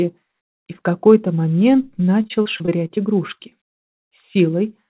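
Repeated packet loss (robotic sound) runs from 2.22 to 2.99 s and again from 3.35 to 4.03 s. Audio kept dropping out in holes of up to 37 ms and 48 ms, each patched by stretching the preceding sound, so both stretches turn choppy, with pieces missing. Through the narrowband call path, nothing is heard above 4 kHz, which fits a G.711-style codec.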